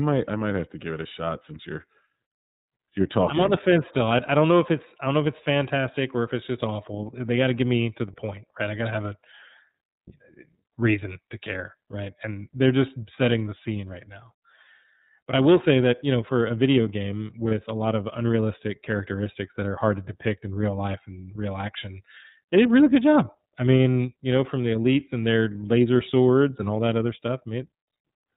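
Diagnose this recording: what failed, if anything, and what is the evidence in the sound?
The codec stage failed. The whole clip carries the iLBC codec. Nothing above 4 kHz survives, and the speech has a plainly audible rough, synthetic edge. Each 30 ms block is coded on its own, which fits iLBC's 13.33 kbps mode.

The network stage also failed. At 17.49 s, between "for a video game" and "a lot of unrealistic", one lost iLBC frame leaves a 30 ms gap. The decoder fills it by repeating the last pitch cycle with noise, giving a brief buzzy held vowel. The speech recovers at once.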